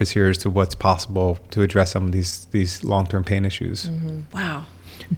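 At 2.30 to 2.33 s, short concealed packet loss: about 14 ms was synthesised by extending the preceding speech, leaving a brief smear rather than the silent gap of a dropout.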